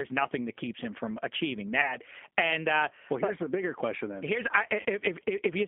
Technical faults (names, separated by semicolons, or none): G.729 codec; VoIP packet loss concealed by the speech codec